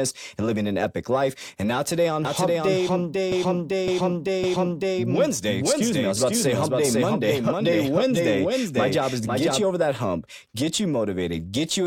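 From 2.25 s, just after "now today on", until 9.62 s, before "over that hump get", a doubled audio track runs: a full-band copy at roughly the same level trails about half a second behind, dry and starting and stopping abruptly. It is likely a second, slower capture path mixed in.

Between 3.32 and 4.99 s, repeated frames produce a stutter: a 557.3 ms block plays three extra times, so the decoder repeats the same stretch and the audio grows 1.67 s longer.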